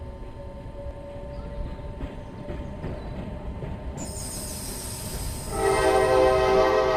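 At 4.01 to 4.05 s there are lost LE Audio frames: about 38 ms of signal never arrived, which fits several 7.5 ms LC3 frames. The decoder filled the gap by repeating the last spectrum with randomised phase, so the sound briefly turns into a noisy, fading smear.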